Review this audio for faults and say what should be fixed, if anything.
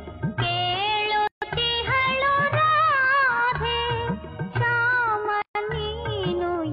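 Gaps at a join of encoded pieces open at 1.27–1.42 s (145 ms) and 5.42–5.55 s (133 ms), 4.0 s apart. Each separately encoded piece kept its start-up encoder delay and padded last frame. Unlike a dropout, the sound resumes exactly where it stopped, with nothing lost. Trim each piece's encoder delay and padding before joining, or encode the audio as one continuous run.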